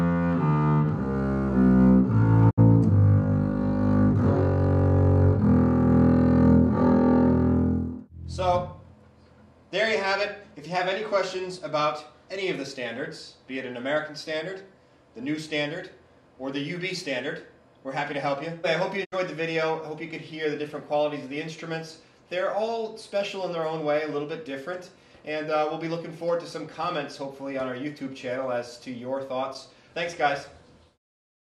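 The audio has two digital broadcast dropouts, at 2.49 s and at 19.04 s. Each one is a brief hole of about 0.1 s. The sound fades out over roughly 20 ms, goes silent, then resumes. The receiver stopped getting usable frames and muted until clean ones returned. The gap points to about 64 ms of programme going missing, which fits two lost frames. That material is gone, not delayed.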